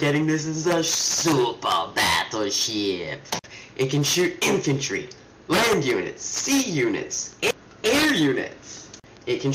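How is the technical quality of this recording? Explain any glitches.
No dropouts, clicks, distortion or other faults are audible anywhere in the recording.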